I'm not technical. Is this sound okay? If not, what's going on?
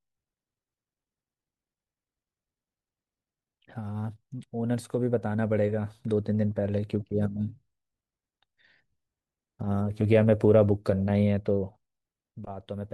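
Yes, nothing in this speech recording needs attention.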